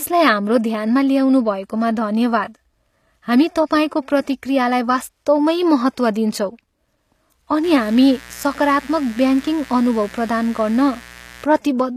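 It's a speech clip, and the whole thing has a processed, synthetic top end. Nothing comes through above about 14.9 kHz, and the treble that is there doesn't quite belong to the voice: the s sounds come out gritty and a bit metallic, and the codec damage is plainly audible. That's likely HE-AAC compression at a low bitrate, something around 24 kbps. The codec keeps only the lower spectrum and rebuilds the highs by copying lower bands upward under a coarse envelope, so the harmonics don't line up across the join. Then from 7.63 s to 11.46 s there's a mains buzz sitting roughly 20 dB under the speech. It's a steady, raspy 60 Hz buzz with harmonics climbing into the kilohertz range. That's the sort of thing a dimmer, a rectifier or a missing shield lets in, with sharp switching spikes twice every mains cycle.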